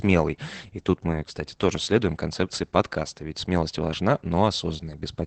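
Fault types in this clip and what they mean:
Opus voice compression, throughout: the speech carries the sound of Opus's SILK linear-prediction coder at a low rate, which fits about 12 kbps. The band stops near 8 kHz, and coarsely coded excitation leaves the voice plainly muffled, hoarse and faintly robotic.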